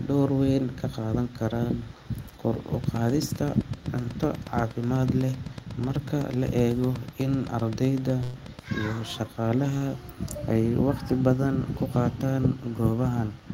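Interference from nearby equipment or a faulty connection or power supply is the likely source of the train of clicks that runs through this speech recording from 2.84 to 8.60 s. The pulses arrive at a steady pace of about eight per second, roughly fifty in all, each with much the same shape. Their peaks sit about 5 dB above the signal, so they tick over the speech and through the pauses. Near the end of that stretch, held-up packets likely drained the receiver's jitter buffer, causing a call audio freeze from 8.23 to 8.37 s. The receiver carried the last sound forward for 105 ms as a fading buzz or hiss, never dropping to silence. When the packets arrived, playback resumed exactly where it had stopped, so nothing was lost, but everything after that point runs 105 ms later than before. A smaller short stall from a late packet follows at 9.78 to 9.84 s. One packet was not on hand when due, so the receiver stretched the preceding sound for 29 ms until it came in, then continued from the same place. 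Nothing is missing, but that moment is held slightly too long, with a faint buzz or dip where the sound should have moved on.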